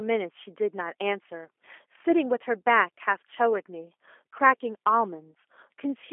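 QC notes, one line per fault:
throughout, G.729 codec: the speech sits inside a telephone band from 300 Hz to 3.4 kHz, with nothing above, and has a plainly audible rough, slightly synthetic edge. That texture comes from the speech being rebuilt every 10 ms from a vocal tract filter, a pitch predictor and a handful of coded pulses rather than sent as a waveform, which fits a G.729A stream at 8 kbit/s.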